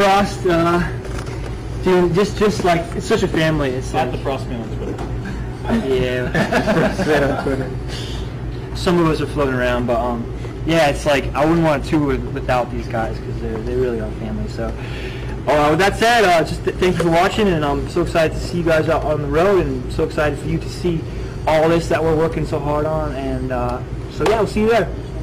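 Hard clipping runs through the whole clip. The signal is driven about 17 dB past what the chain can pass, so around a tenth of the samples hit the ceiling and are cut flat. Those flat tops add high harmonics, heard as a harsh fuzz on every loud sound.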